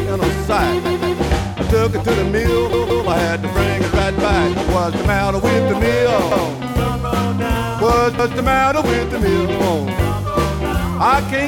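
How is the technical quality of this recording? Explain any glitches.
The recording has a repeated buffer fault in four places. At 0.85–1.20 s and 2.73–3.07 s, a 171 ms piece plays three times in a row. At 6.32–6.49 s and 8.19–8.36 s, it plays twice. Each time, new audio arrived late, so the device replayed its last buffer, which fits an 8192-sample buffer. Unlike a dropout, nothing goes silent. The same chunk stutters with a hard join at each repeat.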